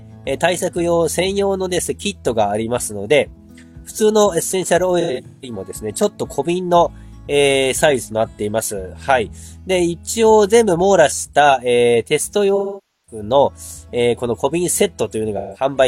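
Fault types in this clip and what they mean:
AAC frame loss with concealment: stretches of coded audio went missing, and the decoder bridged each gap by extending the last good spectrum, so the sound turns smeared, noisy and phasey instead of stopping. It occurs at 5.00–5.54 s as scattered gaps whose longest run is around 150 ms, at 12.55–13.22 s over about half a second, and at 15.37–15.65 s. Unlike a plain dropout, there is no abrupt silence or click edge, only a blurred wash.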